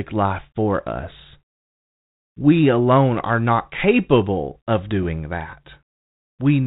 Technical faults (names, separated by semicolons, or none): bit errors on an ADPCM link